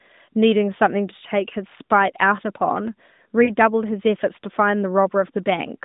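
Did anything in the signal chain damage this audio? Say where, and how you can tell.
Yes. At the network stage, there are lost AMR speech frames from about 3.44 to 3.51 s. For roughly 40 ms the sound smears and sags instead of cutting cleanly, which fits two 20 ms frames failing their checks over the radio link. The decoder covered the gap by repeating the last good pitch and vocal tract settings at dropping gain, so you get that brief warbly dip before things recover. It sits on top of the narrowband AMR sound, topping out below about 3.7 kHz.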